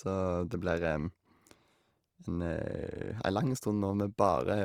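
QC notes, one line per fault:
Throughout, Opus compression: the speech sounds grainy and rough, with noisy fill in place of detail. Full bandwidth remains. Likely cause is Opus music mode at around 24 kbps.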